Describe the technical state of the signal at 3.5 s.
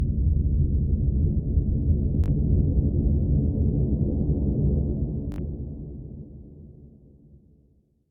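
At 3.5 s the audio is intact, with no dropout, clipping, distortion or other fault at that moment.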